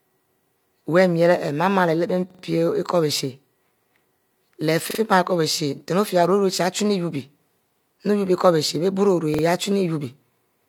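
A speech recording with three repeated-buffer stutters. At 2.30 to 2.43 s, one piece of about 43 ms plays four times in a row. At 4.91 to 4.99 s and 9.34 to 9.43 s, a piece repeats three times. Each repeat joins hard to the one before. Fresh audio reached the output late, so the device replayed its last block. The repeat length fits a 2048-sample buffer. Nothing seems lost afterward.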